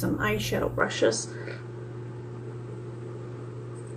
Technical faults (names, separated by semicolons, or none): input switched to a poorer device